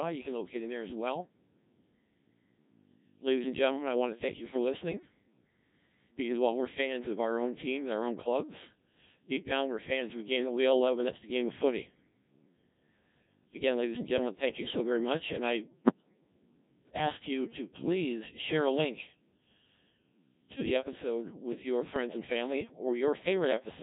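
Codec 2 vocoder damage runs through the whole clip. The decoder rebuilds the speech from sine waves driven only by pitch, voicing, energy and a coarse spectral envelope, so the original waveform is gone. The heavy, buzzy, robotic character fits the 1.3 kbit/s mode.

Bit errors on digital voice radio strike from 15.68 to 16.21 s. Corrupted bits, at a rate of roughly 7 percent, scramble the pitch, level and spectral parameters frame by frame. The sound lurches into warbles and bleeping gibberish, in a pattern that fits about a dozen damaged frames.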